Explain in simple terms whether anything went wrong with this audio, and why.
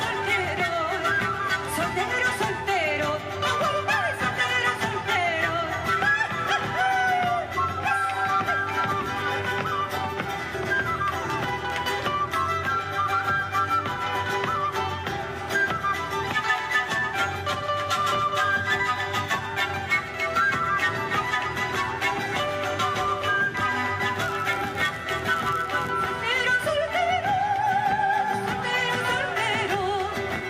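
A block size mismatch (padded) occurs from 24.15 to 25.91 seconds. During this stretch, one stage of the audio chain handed over blocks slightly shorter than the next stage expected, and the missing part of each block was filled with silence. Those tiny silent gaps repeat about 100 times a second, which you hear as a steady buzz. The gaps also stretch the audio, so it plays about 0.4% slower while keeping roughly its normal pitch.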